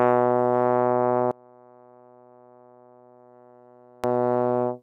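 A music clip: from 1.31 to 4.04 s it drops by about 29 dB to a faint residue, likely one channel inverted cancelling centred content in mono. The waveform shrinks to a sliver and the spectrogram dims across the band.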